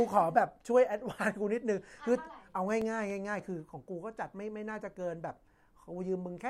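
CD scratch ticks run from 2.24 to 3.39 s in this speech: five clicks, the longest around a millisecond, where a scratch outran error correction once per disc turn.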